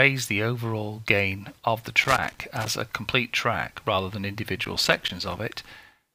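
A worn or dirty contact in the signal path is making and breaking as it shifts, chopping the audio into an irregular burst of crackle and scratching. This loose connector crackle runs from 2.04 to 2.67 s and again from 4.64 to 5.38 s.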